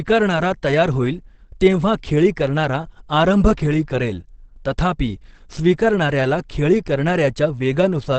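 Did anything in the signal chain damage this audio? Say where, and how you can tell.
Yes, at the codec stage, throughout the speech: heavy Opus compression, likely in its SILK speech mode at a low rate near 16 kbps. Nothing sounds above 8.4 kHz, so the wideband-limited speech comes across muffled and hoarse, with plainly audible coding damage.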